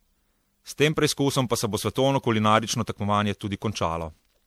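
Generation loss runs through the whole speech clip, from start to finish. The sound is swirly and hollow, with smeared consonant attacks and a watery, shifting texture far worse than a single lossy encode would leave. This likely comes from repeated decode-and-re-encode passes, around seven of them, consistent with an MP3 chain at about 96 kbit/s. Each pass quantised on a shifted frame grid, so noise and spectral gaps piled up.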